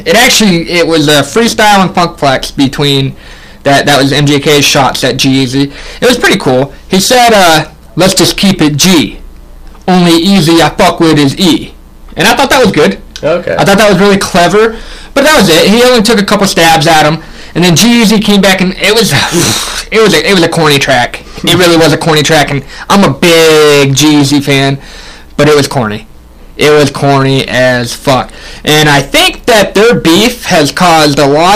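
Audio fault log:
Throughout: hard clipping, overdriven about 24 dB so nearly a third of the signal is sliced flat, giving harsh fuzz on every loud sound, unlike softer rounded saturation.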